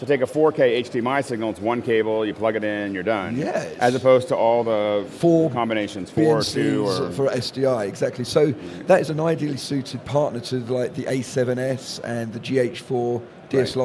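No technical faults are audible anywhere in the audio.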